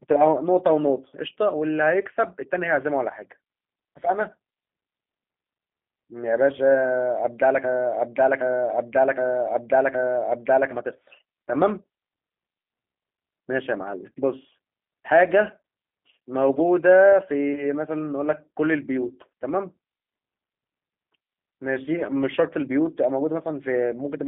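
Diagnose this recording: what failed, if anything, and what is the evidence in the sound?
The codec stage failed. The speech has the plainly audible G.729 codec character: rough, slightly synthetic voicing from a low-rate model that rebuilds each 10 ms frame from a vocal tract filter, a pitch estimate and a few pulses rather than the actual waveform. The band runs from about 200 Hz to 3.5 kHz, with nothing above 3.6 kHz. That fits an 8 kbit/s narrowband VoIP leg carrying the whole 24-second clip.

A broken-record loop runs from 7.64 s to 10.71 s. A 0.77 s fragment repeats exactly, back to back, four times, with no new material between repeats. The sound that should have filled those three seconds is gone. The likely cause is a stall in the playback or streaming stage. The last buffered fragment was re-sent until fresh data resumed, after which the audio continues from a later point rather than picking up where it broke off.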